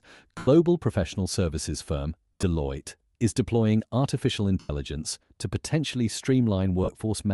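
Bluetooth LC3 compression runs through the whole speech clip. It adds a grainy, breathy edge and a thinned, noise-filled top end, likely from an LC3 encode at a rate that fits 48 kbps with 7.5 ms frames. The encoder discards upper-band detail and fills it with noise.

Lost LE Audio frames cause four dropouts. The first runs from 0.38 to 0.48 s, about 90 ms, just before "professional services firm". The decoder replays the last spectrum with scrambled signs, so the sound smears into noise and fades. The second, from 2.33 to 2.43 s after "professional services firm", is scattered over about 105 ms in short bursts of around 20 ms at most. The third, from 4.59 to 4.70 s after "is deploying artificial", lasts about 98 ms. The fourth, from 6.84 to 6.89 s, is a brief 45 ms smear.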